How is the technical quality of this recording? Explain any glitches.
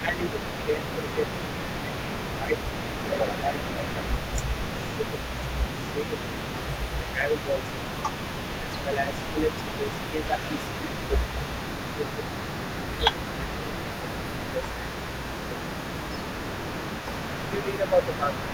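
The quality is poor: the talker is repeatedly ducked, and a faint echo runs throughout.

Speech suppressed in double talk, at 0–5.3, 5.94–6.34, 7.0–7.58, 8.6–11.26, 11.79–12.29, 12.89–14.97 and 17.43–18.43 s: the speech dips by roughly 10 to 15 dB. The likely cause is an echo canceller that mistakes overlapping talk for echo. In the waveform the envelope sags, and the spectrogram shows thinned bands.

Echo leak, across the whole 18-second clip: a repeat of the speech trails 404 ms behind, about 15 dB quieter, likely from residual loudspeaker pickup. On a spectrogram it shows up as faint, time-shifted ghost harmonics.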